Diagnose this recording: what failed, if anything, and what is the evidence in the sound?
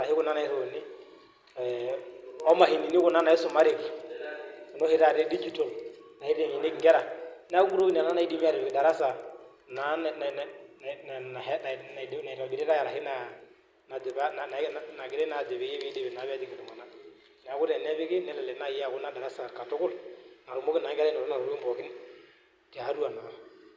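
The sample-rate conversion stage failed, with the resampler restarted on every block. From 0.0 to 16.6 s the speech carries a steady tick at 10 Hz that rides only on the signal and drops out in pauses. Each 100 ms block was converted in isolation, consistent with a 44.1 to 16 kHz downsample, so its filter lacked true neighbouring samples at the edges. A spectrogram would show faint vertical lines every 100 ms, and the waveform would show small discontinuities at those boundaries.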